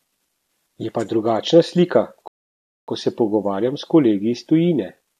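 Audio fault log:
2.28–2.88 s, rebuffering stall: after "pa drugačna slika" the speech drops to silence for about 0.6 s, then resumes exactly where it left off with "ko se pogovarjam s". Playback halted while awaiting data, so no speech is lost, only time added.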